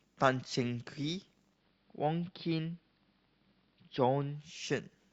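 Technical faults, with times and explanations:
1.47 to 4.50 s, digital radio blending to analogue: the receiver lost its digital signal and cross-faded to the AM broadcast of the same station, then faded back. Each blend takes 172 ms. During the AM stretch the speech loses its top end, because AM carries a narrow audio band. A faint hiss sits roughly 40 dB below the speech. The level drops by about 1 dB.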